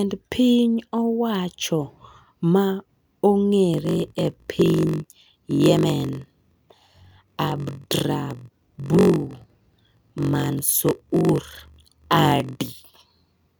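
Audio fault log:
3.72 s to the end: block size mismatch (padded). Each block written is shorter than the block the next stage reads, which fits a 1024-sample read block, and the missing tail of every block is filled with zeros. The resulting short silent gap, repeated once per block, produces a buzz at 46.9 Hz. Because the padding adds time without resampling, the speech runs slower, at 0.938 of normal speed, while its timbre stays.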